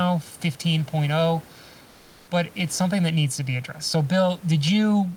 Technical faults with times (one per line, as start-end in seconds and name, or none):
0.00-5.17 channel delay (comb filtering)
1.87-2.27 comfort noise in place of the background